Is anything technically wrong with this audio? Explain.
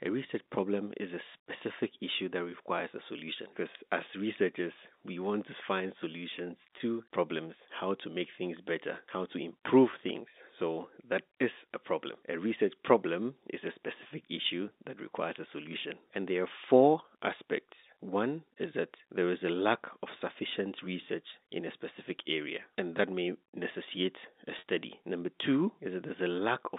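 Yes. Packet loss with pitch repetition occurs at 6.78–6.80 s (after "want to find solutions"), 9.91–9.93 s (after "better how to improve") and 24.59–24.64 s (after "that may necessitate a"). The last pitch period is repeated to bridge each gap. The 20 ms losses sound like a brief buzzy hold, while the 50 ms one is held longer and fades.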